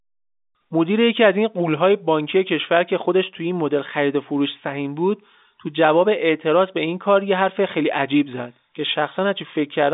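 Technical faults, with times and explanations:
Nothing stood out on listening to this speech, which carries the narrow telephone band of G.711 A-law coding, with nothing audible above about 3.8 kHz.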